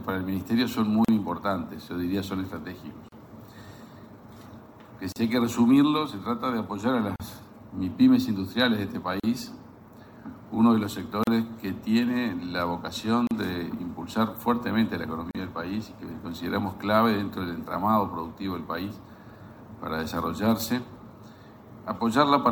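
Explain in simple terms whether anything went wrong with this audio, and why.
Gap at a join of encoded pieces at 1.05, 3.08, 5.12, 7.16, 9.2, 11.24, 13.27 and 15.31 s. Separately encoded chunks were joined untrimmed, leaving roughly 38 ms silences about every two seconds.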